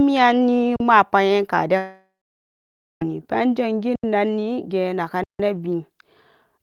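At 0.76 to 0.80 s the speech briefly freezes for 40 ms and resumes softly, picking up where it stopped. This is an underrun with held sample: the output buffer emptied, the converter held its last value flat, and playback continued with nothing lost.

From 1.77 to 3.02 s the sound trails off into a fading buzz or hiss, then about 0.93 s of silence, and speech returns further on. This points to a long network dropout, likely lasting 1.24 s, with that stretch never played.

The same held-sample stall recurs at 3.96 to 4.04 s (80 ms) and 5.24 to 5.40 s (160 ms), each time resuming smoothly where it left off.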